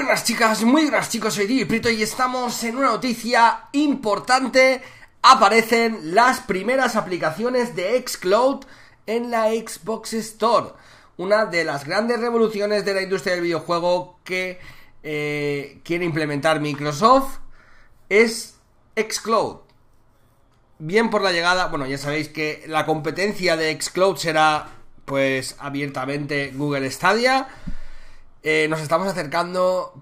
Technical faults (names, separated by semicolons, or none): none